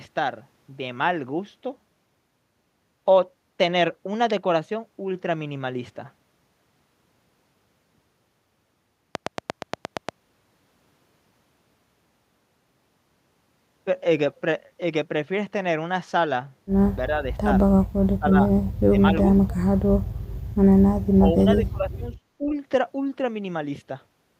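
From 9.15 to 10.10 s there's a train of clicks: about ten sharp, near-identical ticks at a steady 8.6 per second, poking out roughly 20 dB above the speech and clearly audible over it. Something was likely injecting a pulse on a regular cycle, such as interference from nearby gear or a faulty connection or power supply.

Later the speech gets suppressed in double talk, in seven patches: 17.07–17.27, 18.03–18.36, 18.89–18.99, 19.31–19.56, 21.16–21.30, 21.46–22.06 and 22.38–22.54 s. The first and last are milder dips of about 5 and 10 dB. The rest chop deep holes of roughly 20 to 35 dB, up to half a second long in the 21.46 s stretch, so the voice drops out in pieces. The likely cause is an echo canceller that couldn't tell this talker apart from loudspeaker echo while the far side was also talking, so it turned both down.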